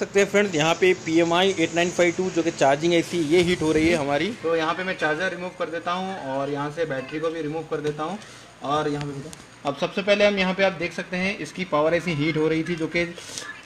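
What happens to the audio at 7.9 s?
At 7.9 s, two faults overlap. The first is mains buzz, present for the whole clip. Switching spikes tied to the 60 Hz supply leak into the signal twice per cycle. They produce a ladder of 60 Hz harmonics reaching up into the kilohertz range. The result is a steady, raspy buzz sitting roughly 35 dB below the wanted sound. It does not change in character from moment to moment.

The second is periodic clock jitter, running from 3.06 s to the end. Interference is wobbling the converter's sampling clock at around 2 kHz. That timing wobble puts sidebands about 2 kHz above and below every component of the sound. Higher-frequency content is hit hardest. The audible effect is a rough, metallic edge on the sound. It disappears whenever the sound itself drops out.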